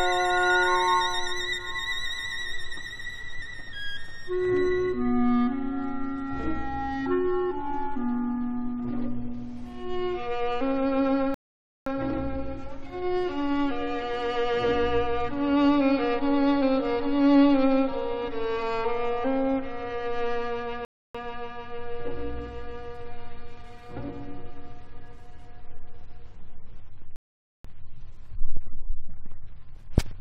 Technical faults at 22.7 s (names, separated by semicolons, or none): none